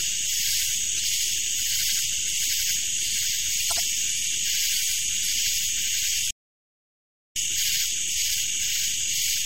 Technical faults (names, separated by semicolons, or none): corrupt frame decoded; playback stall; time-compressed catch-up